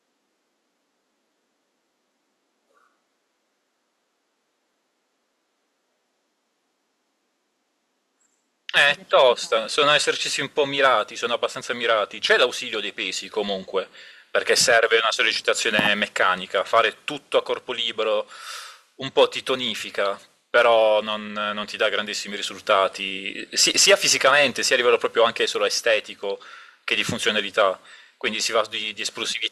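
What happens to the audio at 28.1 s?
At 28.1 s the speech carries on intact, with no dropout, click, distortion or other fault at that point.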